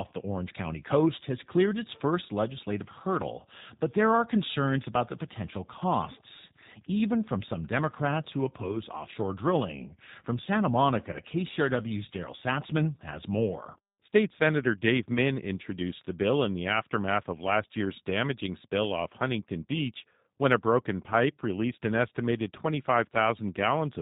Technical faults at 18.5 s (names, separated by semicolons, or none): G.729 codec